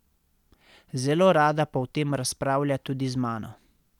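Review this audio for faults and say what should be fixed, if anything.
Nothing needs fixing here.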